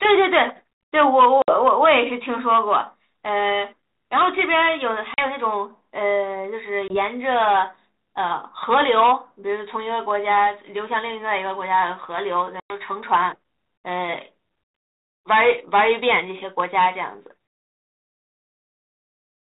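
Speech over what sounds like a G.726 ADPCM link, band-limited below 4 kHz with light coding damage that fits 32 kbit/s. It has four bursts of packet loss on an ADPCM call. Hard-edged silent holes appear at 1.42 s (60 ms, a few packets), 5.14 s (40 ms, a couple), 6.88 s (20 ms, a single packet) and 12.6 s (100 ms, about five). Each time the decoder's predictor and step size lose sync with the sender, so the sound returns slightly distorted before settling.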